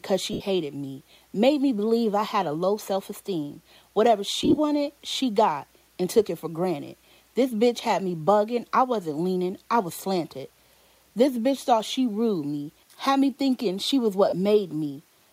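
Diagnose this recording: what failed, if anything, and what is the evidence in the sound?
Lost LE Audio frames at 0.33–0.41 s, 4.42–4.58 s and 14.29–14.33 s: Bluetooth link dropouts, which the LC3 decoder conceals by repeating the last spectrum with randomised signs, leaving brief noisy smears.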